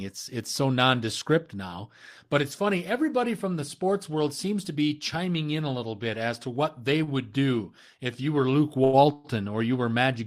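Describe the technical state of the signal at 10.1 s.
At 10.1 s the speech signal is intact, with no dropout, distortion or other fault to be heard.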